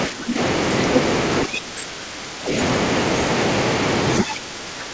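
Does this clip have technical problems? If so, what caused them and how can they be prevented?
Yes. Speech suppressed in double talk: the echo canceller, likely unable to separate overlapping talkers, turned the speech down by about 10 dB at 0.07–0.38 s, and by about 15 dB at 1.45–2.53 s and from 4.23 s to the end. Using a headset or tuning the canceller's double-talk detection keeps it from attenuating the near-end talker.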